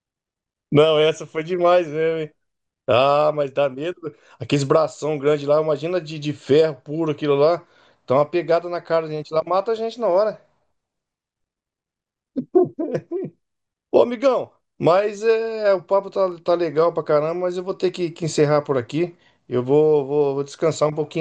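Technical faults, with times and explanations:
Throughout: MP2 compression, likely at 80 kbps, gives dull, gurgling speech as upper sub-bands switch on and off, seen as flickering, ragged high-frequency blocks on a spectrogram.
16.32 s: block of digital silence, a 0.73 ms dropout, which fits a 32-sample block, heard as a tick or dip rather than silence. The waveform shows a brief flat line, and the spectrogram a vertical broadband stripe.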